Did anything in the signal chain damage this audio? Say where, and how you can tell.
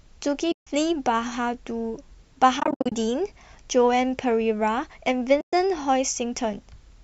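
Yes, at the network stage, as AAC frame loss with muting. The sound drops out at 0.52–0.67 s and 5.41–5.53 s, and breaks up repeatedly across 2.60–2.92 s in runs of up to about 70 ms. The decoder zeroes the missing spectrum, so a spectrogram shows clean full-band gaps and the waveform tapers out and back in.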